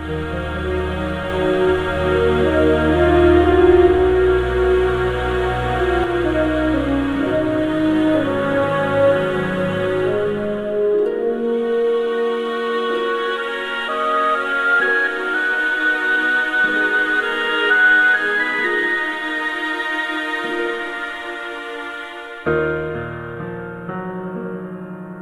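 From 1.3 s to about 6.0 s there's a doubled audio track: a second full-band copy trails the sound by about half a second, at much the same level, with no decay. It cuts in and out abruptly, most likely a second capture path running late.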